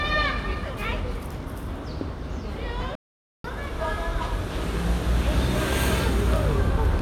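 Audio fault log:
2.95–3.44 s, playback stall: the sound drops abruptly to silence in mid-flow for about 490 ms, then resumes. The gap likely comes from the player running out of buffered data, or its output thread being held up, until it recovered.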